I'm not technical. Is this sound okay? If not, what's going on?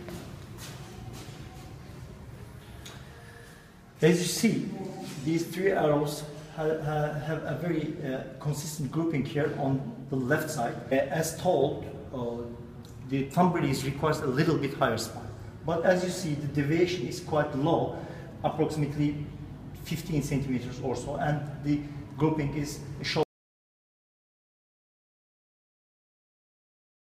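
No. At 23.23 seconds the sound cuts out completely and stays silent to the end, nearly 4 seconds. This is an audio dropout to silence. Even the background hiss vanishes. Most likely the input was lost, through a loose connection or accidental mute.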